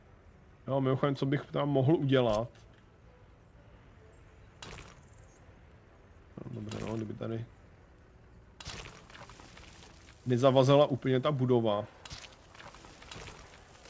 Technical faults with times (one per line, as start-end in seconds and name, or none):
none